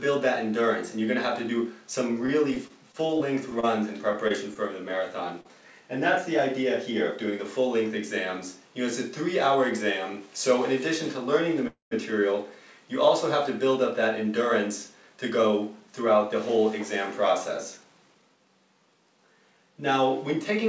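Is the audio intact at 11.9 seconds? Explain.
No. A call audio freeze runs from 11.67 to 11.93 s, likely from packets held up in transit emptying the jitter buffer. The last sound smears into a fading buzz or hiss, then silence, and the audio resumes where it stopped. Unlike packet loss, nothing is skipped; the audio is delayed by about 0.24 s.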